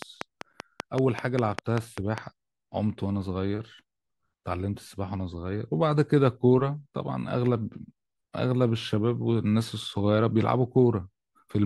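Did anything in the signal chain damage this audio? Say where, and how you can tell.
Yes. A train of clicks runs from 0.02 to 2.19 s, about ten regular pulses at 5.1 per second, well above the speech, likely interference coupling into the analogue wiring.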